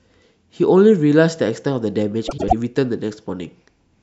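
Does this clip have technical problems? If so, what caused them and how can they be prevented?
Yes. Between 2.27 and 2.53 s there are frames out of order: two neighbouring blocks of coded speech, each about 104.5 ms and consistent with runs of four frames, reached the decoder swapped and were played in that order. The stretch comes out with its halves exchanged, a garbled flutter, though the clip loses no time. Sequence-numbering packets and reordering them in a jitter buffer before decoding prevents this.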